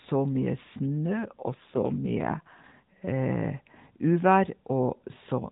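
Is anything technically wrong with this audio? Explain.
Yes. From 1.31 to 2.95 s there is an AMR rate drop. Throughout, the speech carries the light narrowband coloration of AMR-NB, with nothing above 4 kHz. In this stretch the voice turns rougher, buzzier and more synthetic, which fits the codec being pushed from 12.2 down to 5.9 kbps so that more bits go to error protection. Packet loss or a switch to a narrower band would sound different: the band stays the same and nothing drops out. Only the texture coarsens, and it recovers when the rate returns.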